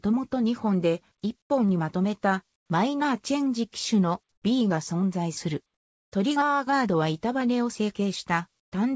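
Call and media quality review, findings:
Comfort noise in place of the background, at 1.42–1.50 s, 2.56–2.70 s, 4.32–4.44 s and 8.60–8.72 s. Quiet background, about 50 dB under the loud parts, swaps for flat, featureless hiss, about 6, 9, 11 and 18 dB lower. Likely sender-side discontinuous transmission. Distinct from packet-loss dropouts: no silence or clicks, just steady noise. G.722 path bandlimited, nothing above 8 kHz.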